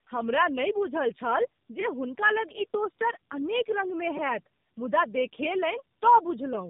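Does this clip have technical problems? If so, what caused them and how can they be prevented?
Yes. Tandem speech coding: throughout, the speech passed through two separate speech codecs, G.729A then AMR-NB, with decoding between them, so it sounds rough, muffled and warbly, with nothing above 3.6 kHz. Prevent it with transcoder-free operation or one codec end to end.

Repeated buffer: at 4.17 s, fresh audio arrived late, so the device replayed one tiny block three extra times, which fits a 256-sample buffer, giving a brief buzzy stutter without losing any speech. Prevent it with larger buffers or higher audio-thread priority.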